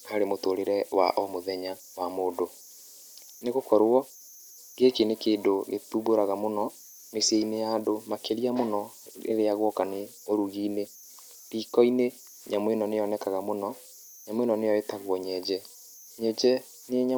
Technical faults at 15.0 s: converter idle tones

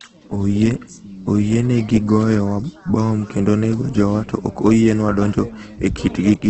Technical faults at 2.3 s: Opus compression

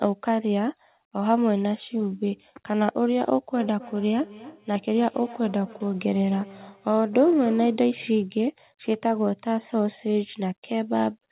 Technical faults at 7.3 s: feedback echo between two devices

